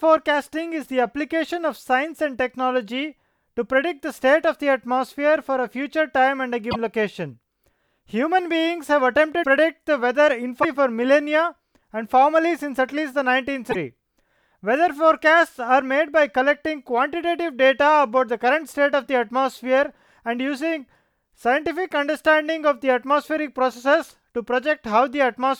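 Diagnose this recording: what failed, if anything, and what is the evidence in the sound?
Codec stage: short glitches in the speech at 6.70–6.76 s, 9.42–9.46 s, 10.62–10.65 s and 13.70–13.76 s, in a stream with 26.1 ms frames. The likely cause is a broken MP3 bit reservoir: after dropped frames, the decoder fetches borrowed bits from the wrong frame and skips ahead.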